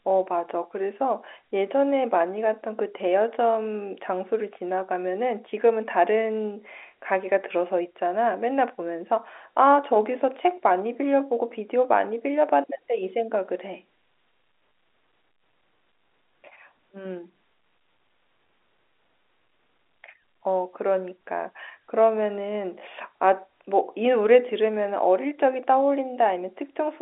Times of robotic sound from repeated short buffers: none

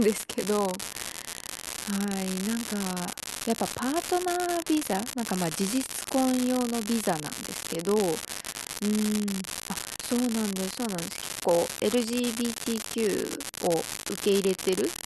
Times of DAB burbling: none

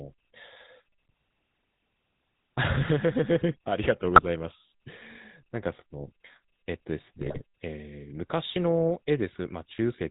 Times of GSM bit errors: 4.16-4.25, 7.20-7.42

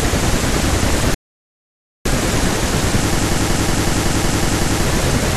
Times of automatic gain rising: none

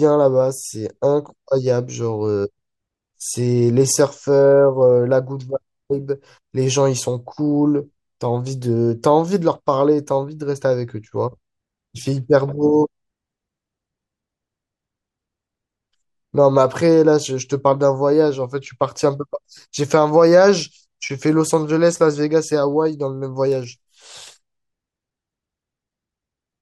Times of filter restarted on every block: 23.48-24.29

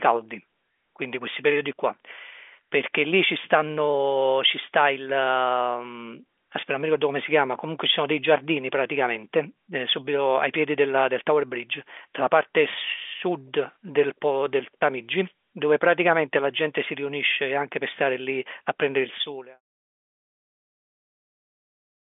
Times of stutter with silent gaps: none

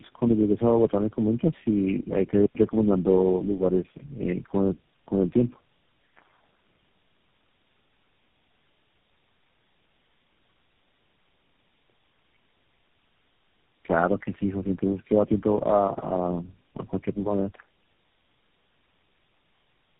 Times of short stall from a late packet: none

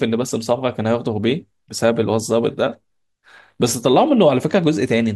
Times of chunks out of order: none

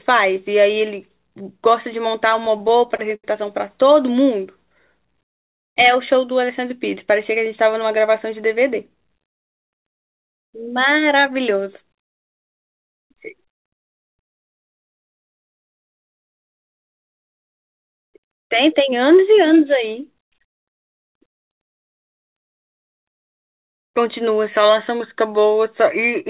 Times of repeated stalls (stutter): 2.45-3.24

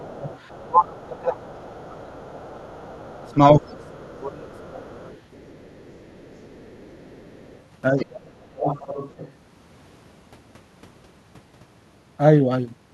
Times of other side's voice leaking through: 0.30-1.03, 1.59-1.63, 2.23-3.90, 4.71-9.33

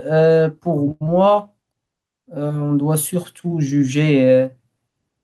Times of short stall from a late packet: 0.91-1.03

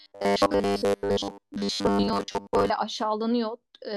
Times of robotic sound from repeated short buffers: 0.01-2.71

